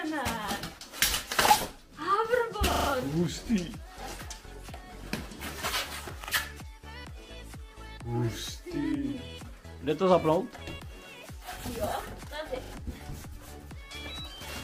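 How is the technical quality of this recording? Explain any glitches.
Three repeated buffer stutters occur at 2.72 to 2.88 s, 6.24 to 6.28 s and 12.64 to 12.72 s. Late data made the last 40 ms segment replay, heard as hard-edged repeats with nothing skipped.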